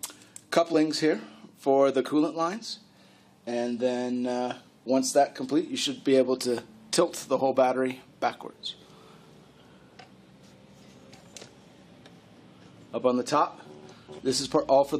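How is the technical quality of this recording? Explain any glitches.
Two brief decoding glitches mar the recording, both early in the clip.

Compressed frames skipped at 0.73 s: a short stretch of the encoded stream never reached the output, either lost from the file or rejected by the decoder as damaged, so playback jumps ahead by roughly 20 ms. The seam is heard as a brief glitch where the sound lurches forward slightly.

Corrupt frame decoded at 2.06 s: a single compressed frame arrived with damaged bits, and the decoder played it anyway. Misread gain values and spectral codes scatter energy into frequencies where it doesn't belong for roughly the span of that one frame. The result is a brief chirp or burst of noise, peaking at about -25 dBFS.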